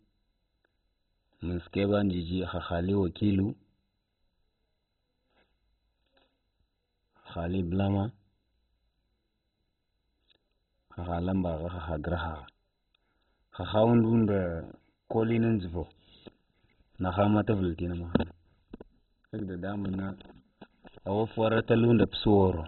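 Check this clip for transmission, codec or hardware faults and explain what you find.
One codec fault runs through the whole recording. From start to finish the speech sounds dull and muffled, with a gurgling, granular roughness, and nothing is heard above about 4.1 kHz. This is likely MP2 compression at a very low bitrate, around 16 kbps. With so few bits, the upper sub-bands are shut off entirely and the remaining ones are coarsely quantised, which causes the churning grit.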